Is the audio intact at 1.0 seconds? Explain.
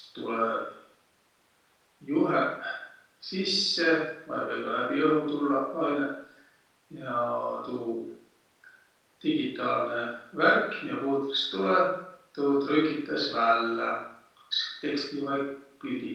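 Yes, the audio is intact at 1.0 seconds, with no audible fault at that moment.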